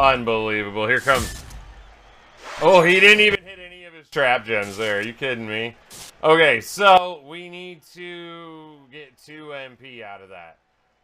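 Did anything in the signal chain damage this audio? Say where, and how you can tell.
Yes. The level drops abruptly twice, most likely from a digital gain change applied in the processing stage without a ramp. At 3.35 s everything falls by about 24 dB, sound and background noise together, then snaps back at 4.12 s. At 6.98 s it falls again, by about 14 dB, and stays down to the end. Because the noise floor moves in lockstep with the sound, this is a sudden gain jump in the signal path, not a change at the source.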